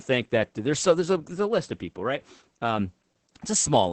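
A speech clip carries Opus voice compression from start to finish. Nothing sounds above 8.4 kHz, matching a wideband limit. The speech is muffled, hoarse and slightly robotic. The coarse linear-prediction excitation fits the SILK coder running near 10 kbps.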